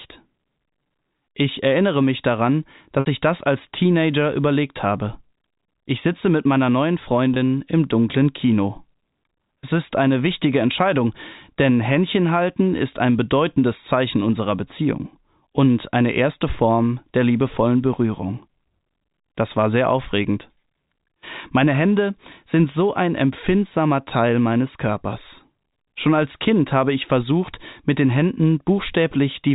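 Packet loss with pitch repetition at 3.00–3.06 s and 7.34–7.36 s: missing audio was patched by repeating the last pitch period, so the speech briefly holds a buzzy tone that fades toward silence across the 60 ms gap, and then holds for 20 ms.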